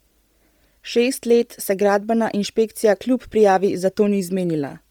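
Throughout the speech, the likely cause is Bluetooth LC3 compression running at a low bitrate, which the heavy damage suggests is around 32 kbps, with 10 ms frames. Short of bits, the codec discards much of the upper spectrum in each frame and fills the gaps with shaped noise. The voice takes on a breathy, grainy edge, with a hissy texture where high detail should be. The band itself still extends to 20.3 kHz, with nothing above that.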